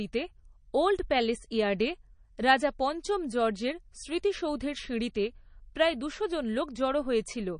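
MP3 compression artefacts run through the whole clip, start to finish. Nothing is heard above 9.8 kHz, so the speech has a dull, capped top and s sounds lose their sparkle. The damage is plainly audible as a watery, swirling quality and smeared consonant attacks. The likely cause is an encoder starved of bits, consistent with something near 32 kbps, cutting the treble and switching weak frequency components on and off between frames.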